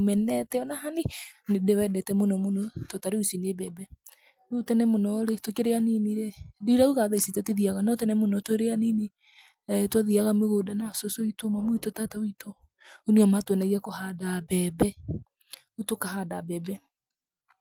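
Nothing in this speech recording stood out as a technical problem on listening.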